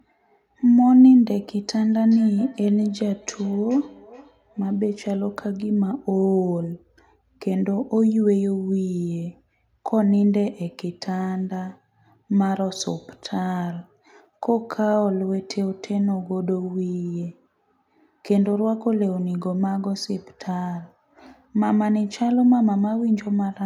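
Speech with feedback echo between two devices from 1.92 to 4.87 s: a second device replays the audio into the microphone, returning it about every 0.4 s, about 24 dB down.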